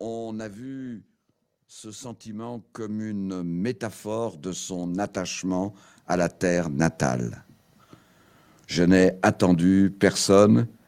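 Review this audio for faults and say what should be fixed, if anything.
Right at the start, from 0.05 to 0.83 s, there's automatic gain falling: the AGC decides the opening is too hot and eases its gain down by about 4 dB, so the speech and the room behind it sink together. Setting a sensible input level before recording starts would stop it.

Then from 1.82 to 7.31 s you get automatic gain rising, a big slow swell of about 20 dB where the AGC thinks things went too quiet and keeps cranking up, dragging the background noise up right along with the voice. Turning the AGC off, or capping its maximum gain, would fix it.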